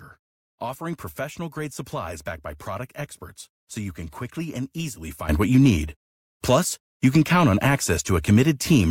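A speech recording with a sudden gain jump at 5.29 s, just after "can quickly and easily": the level rises by about 12 dB in a single step and stays there to the end. Unlike automatic gain control, there is no ramp or pumping. The background noise leaps with the voice at the same instant, which likely points to a gain setting applied between samples.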